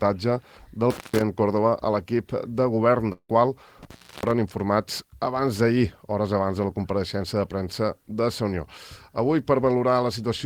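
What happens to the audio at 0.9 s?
An intermittent contact disturbs the audio from 0.90 to 1.22 s. A loose plug or cable connection briefly loses its grip, so the signal path opens and closes again. The sound drops out for about 148 ms within that span, with crackle at the edges as the contact breaks and remakes, and faint hiss remains while the line is open before the audio snaps back.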